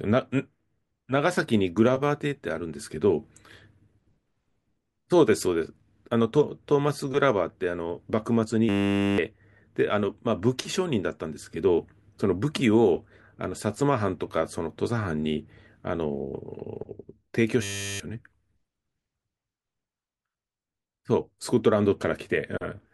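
A steady 100 Hz buzz replaces the speech from 8.69 to 9.18 s and again from 17.63 to 18.0 s, swallowing roughly half a second of audio the first time and about 0.4 s the second. This is a system hang loop: the system stalled while the hardware replayed one 10 ms stretch of its ring buffer over and over.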